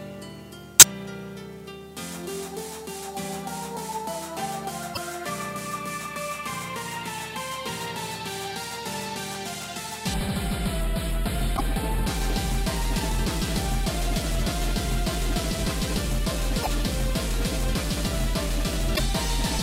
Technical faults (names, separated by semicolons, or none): damaged data in a compressed stream; channel delay (comb filtering)